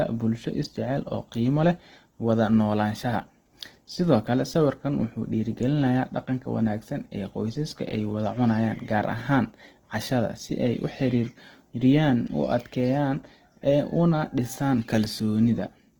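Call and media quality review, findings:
Grainy, rough texture on the speech, plainly audible throughout the clip. Likely cause: Opus compression in music (CELT) mode, at a rate that fits about 16 kbps. Band energies are held, with starved bands filled by folding or noise. Few spectral holes and less swirling than MP3. Full bandwidth is kept, with content up to about 20.1 kHz and no muffled narrowing into speech mode.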